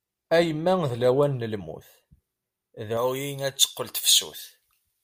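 Pre-emphasis left on from 2.97 s to the end. The treble boost, fitting a J.17 curve, was never undone, leaving 10 kHz about 11 dB above 1 kHz, so the speech turns thin, bright and hissy.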